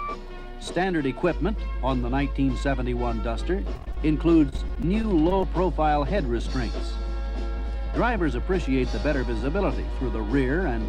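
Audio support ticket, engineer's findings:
Repeated packet loss (robotic sound), 3.75–3.97 s: 7 gaps, longest 21 ms, concealed by extending the last audio, with about 45% of the span patched. Probable component is the network path and receiver loss concealment; the choppy effect comes from fills interrupting the sound again and again.

Repeated packet loss (robotic sound), 4.49–5.44 s: 10 gaps, longest 30 ms, with about 13% of the span concealed. Same mechanism: each lost or late packet is bridged by continuing the previous audio, and the next gap arrives soon after.

Jitter buffer speed-up, 7.58–10.15 s: playback runs at 102% with pitch unchanged. The receiver's jitter buffer trimmed short pitch-period pieces, roughly 50 ms in total, to shed excess buffered delay after late packets bunched together.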